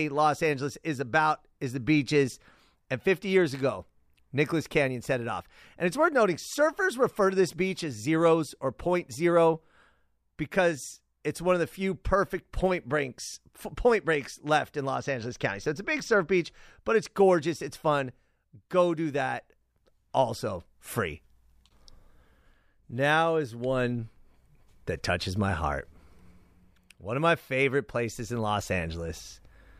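A speech clip with one fault: channel delay, heard as comb filtering. It runs from 14.95 to 16.38 s, just after "point breaks left in" and ending before "but it's gorgeous it's". One channel lags the other by roughly 0.05 ms, which fits a delay of a couple of samples. When the two are summed to mono, the shared sound cancels at spaced frequencies. The first notch sits near 10 kHz, so the top end turns dull.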